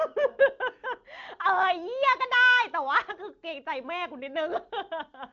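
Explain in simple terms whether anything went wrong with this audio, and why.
Nothing went wrong here.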